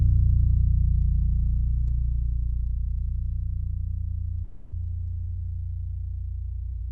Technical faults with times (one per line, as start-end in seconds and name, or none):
4.44-4.73 long network dropout